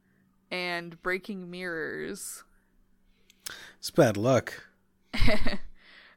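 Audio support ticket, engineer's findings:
No faults found on this speech recording, nothing here that needs chasing, so the ticket can be closed from the audio side.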